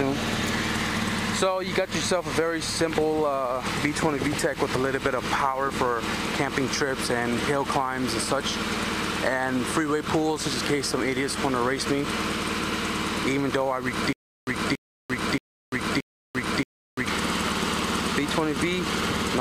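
From 14.13 to 17.07 s there is a stutter with silent gaps. A 281 ms burst repeats four times, each followed by about 345 ms of silence, so it returns every 626 ms. The player likely stalled, replaying its last fragment at each retry. The intended audio is lost.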